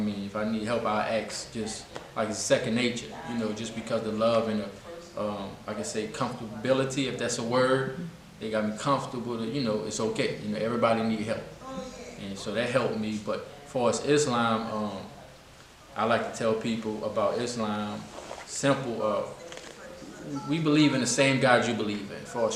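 No technical faults can be heard anywhere in the recording. The signal holds steady from its first moment to its last without any audible disturbance.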